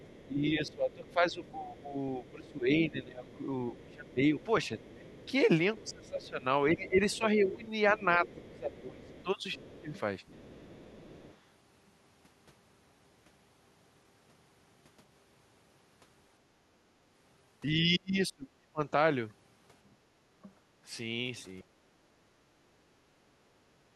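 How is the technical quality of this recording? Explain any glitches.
The recording has echo-control problems: a faint second voice, dips in the main talker's voice, and one brief drop in the room sound.

From 0.0 to 11.36 s, the other side's voice is leaking through. A loudspeaker echo was likely not fully removed from the microphone, so a second voice sits faintly underneath, roughly 25 dB below the main speech.

Speech is suppressed in double talk from 0.26 to 9.97 s and again from 17.71 to 18.81 s. The canceller likely could not separate the talker from the echo while both were active. The main voice dips in patches, by around 15 dB early on and by roughly 30 dB in the later stretch.

At 16.42 to 16.59 s, the background is gated by the echo canceller. It clamped the microphone while the loudspeaker played, so the room sound drops by about 12 dB for a moment, then returns once the canceller releases.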